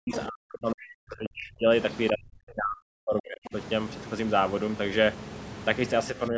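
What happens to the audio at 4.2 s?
Nothing goes wrong at 4.2 s. The speech carries on intact, with only the room noise sitting about 13 dB below it.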